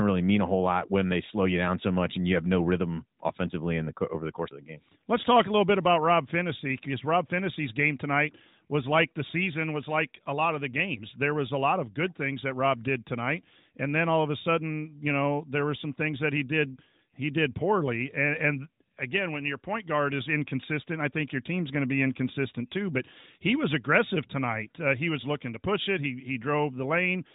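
No technical faults occur anywhere in the speech. It carries the sound of AMR narrowband mobile coding, with nothing above 3.8 kHz and only a light synthetic edge that fits the codec's highest 12.2 kbps mode.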